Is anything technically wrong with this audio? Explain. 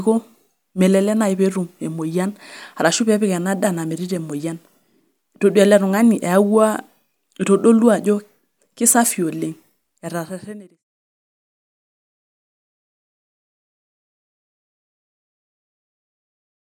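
No, nothing is technically wrong with this audio, and the fade-out that ends at 10.84 s is smooth.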